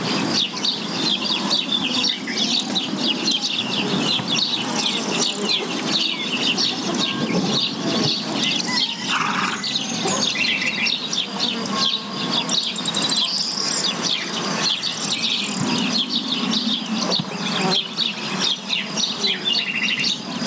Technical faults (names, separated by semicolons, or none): gain pumping